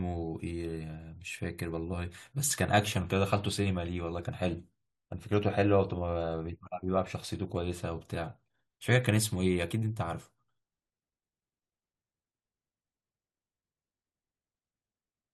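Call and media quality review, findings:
No audible faults found.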